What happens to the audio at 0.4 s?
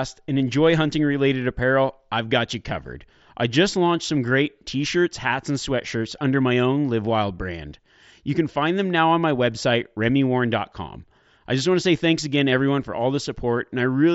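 At 0.39 s there is concealed Bluetooth headset packet loss. About 15 ms dropped out, fitting a couple of lost packets. The receiver filled the gap by repeating recent waveform, so it sounds like a brief buzzy tone held at full level, with a small warble where real audio returns.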